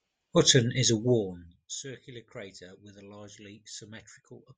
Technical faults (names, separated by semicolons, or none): none